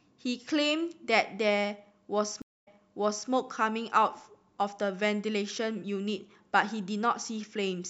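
A speech recording with a stream reconnect at 2.42 s. The audio drops to about 0.22 s of silence, then comes back with a fresh decoder roughly 0.65 s earlier in the stream, so a stretch of speech is heard twice before things settle by 3.29 s. On a waveform or spectrogram this appears as a flat, empty gap, followed by a block of energy that duplicates the pattern just before the break.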